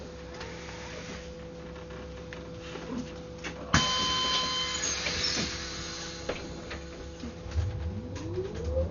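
From start to finish the sound is dull and heavily damaged, with nothing above about 7.1 kHz and a rough, fluttering noise clinging to tonal parts. This is likely Dolby Digital compression at a very low bitrate, near 48 kbps, where starved frequency lines are filled with noise.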